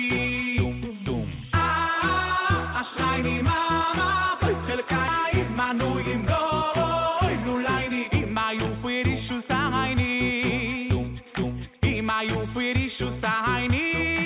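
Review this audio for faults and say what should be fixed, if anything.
At about 5.08 s there's a skip ahead. Roughly a second of audio just isn't there, and the two sides are butted together with no fill, so it sounds like a hard jump forward. What likely happened is that the jitter buffer overflowed with newer audio already queued, and the receiver threw out the backlog to catch up. That cut the delay by about a second in one go.

After that, the jitter buffer speed-up kicks in four times: 6.38–7.59 s at 103%, 8.07–9.49 s at 106%, 10.79–12.20 s at 104%, and 13.32–14.25 s at 104%. The buffer was still running deeper than its target, so the receiver kept trimming tiny pitch-period-sized slices to drain it. Pitch stays put but the pace creeps up, and it feels rushed in the second burst, where about a tenth of a second gets shaved off. Through all of it the G.711 A-law path leaves nothing above 4 kHz.

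To prevent both, smooth out the bursty packet delivery upstream and let the buffer adapt its target more gradually, so it never builds a backlog big enough to dump or squeeze.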